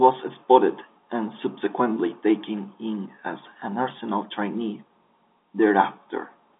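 No faults to report: the speech sits in the normal G.711 telephone band of 250 Hz to 3.6 kHz, with nothing above 3.8 kHz.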